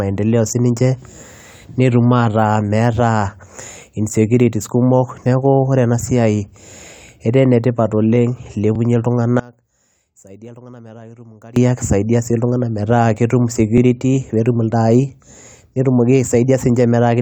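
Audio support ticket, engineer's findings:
Overlapping chunks: short stutter/click at 3.73–3.76 s, 8.76–8.78 s and 13.78–13.80 s, spaced every 5 s. Each join replays about 21 ms of audio. Chunker or streaming buffer starts each block before the previous one ends.

One channel inverted: speech drops by about 23 dB from 9.40 to 11.56 s, leaving a faint residue. Likely one stereo leg flipped in polarity, so the centred speech cancels on the mono sum. Check the downmix or channel-routing stage.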